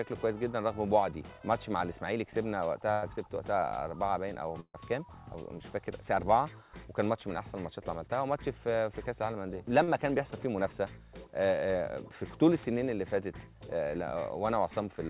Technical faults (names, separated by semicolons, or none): burst of packet loss; short concealed packet loss